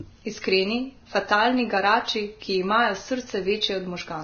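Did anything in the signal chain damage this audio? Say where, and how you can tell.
Yes, at the codec stage, throughout the speech. Nothing is left above 6.5 kHz, and the remaining treble is hissy and grainy, with roughened tones and smeared consonant attacks. Heavy Vorbis compression is the likely cause: the encoder keeps a smooth spectral floor but quantises the high residue so coarsely that detail becomes noise of similar energy. A plain low-pass filter would leave the band below 6.5 kHz clean, without this grit. The damage points to a bitrate under about 20 kbps.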